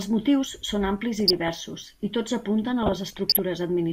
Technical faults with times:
1.20-1.50 DAB burbling
2.83-3.39 DAB burbling

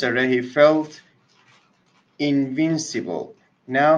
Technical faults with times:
none

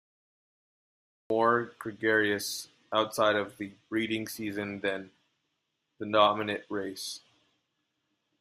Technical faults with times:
0.00-1.30 cut-off start

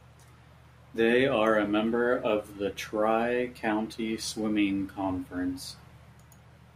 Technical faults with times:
none

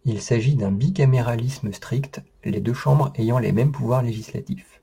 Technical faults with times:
1.14-4.83 sample clock jitter

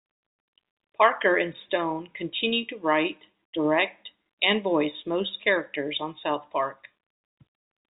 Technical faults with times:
none

